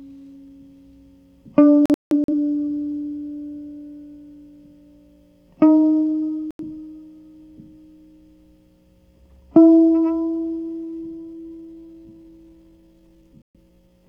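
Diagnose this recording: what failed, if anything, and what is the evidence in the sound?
Digital broadcast dropout at the receiver/codec stage: the music mutes from 1.86 to 2.33 s in several holes (256 ms lost over about 430 ms, longest 171 ms), then 6.51–6.62 s and 13.42–13.56 s. The gaps fit whole frames of roughly 43 ms, so failed frames were muted. A waveform shows flat silent stretches and a spectrogram shows full-height blank columns.

Time-stretched section from 10.83 s to the end: the pace abruptly slows to 0.663 times speed while the pitch stays put. This is likely editing or playback software repeating short grains to fill a length. On a spectrogram, harmonics hold steady.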